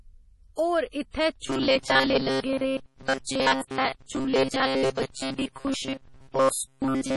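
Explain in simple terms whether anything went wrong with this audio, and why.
The speech sounds watery and swirly the whole way through, with smeared attacks and nothing above 11.5 kHz. That is heavy MP3 compression damage, likely from too few bits. The encoder throws away weak detail, which flickers in and out, and cuts off the treble.

From 1.43 s, right after "होर इत्थै", to the end, the voice becomes a rigid, metallic buzz at 133 Hz. This is robotic sound from repeated short buffers. New audio likely arrived too seldom, so the software kept repeating short chunks of about 7.5 ms. Those repeats make up most of that stretch, and the real audio in between is skipped.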